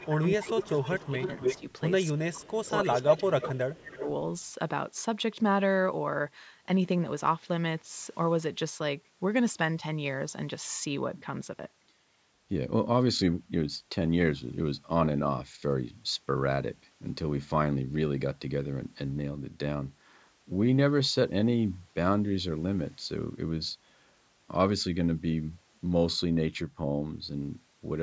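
Right from 0.0 s there's a faint echo leak, a copy of the speech coming back about 282 ms late and sitting about 20 dB down. The far end's loudspeaker audio is likely slipping past its echo canceller. It returns much stronger from 0.43 to 1.73 s, about 5 dB under, then at 2.92 to 3.19 s it's as loud as the speech itself. Weaker scraps follow at 3.43 to 3.49 s and 3.95 to 4.05 s. The delay creeps from about 288 to 305 ms.

Overlapping that, you get speech suppressed in double talk. The speech dips, most likely because the canceller can't tell the talker from the returning echo and pulls both down. It drops by roughly 15 dB across 0.08 to 1.29 s, about 10 dB for a moment at 1.57 to 1.64 s, and up to roughly 25 dB for about one and a half seconds between 2.13 and 4.08 s.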